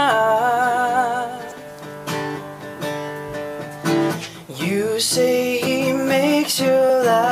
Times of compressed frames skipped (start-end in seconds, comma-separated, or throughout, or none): 1.50, 5.66, 6.88